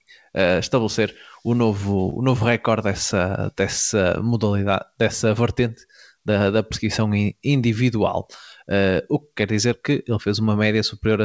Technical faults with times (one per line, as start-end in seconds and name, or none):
2.10-2.14 short concealed packet loss